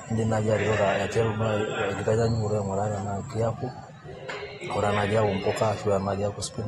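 It's a short speech recording with plainly audible AAC compression throughout: nothing survives above 12.4 kHz, so it sounds dull, with smeared, warbly sibilants. That's likely a low-bitrate AAC-LC encode, with damage that fits something around 32 kbps.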